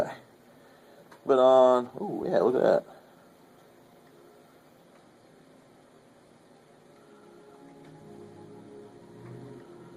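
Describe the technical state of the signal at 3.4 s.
At 3.4 s a jitter buffer speed-up is under way, from 2.99 to 3.58 s. Pitch-period cuts play it at 113% speed, hurried but same pitch, dropping about a tenth of a second. A spectrogram shows squeezed timing with unchanged harmonic spacing.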